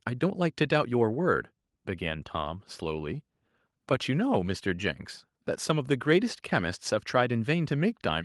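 No technical faults can be heard in this speech.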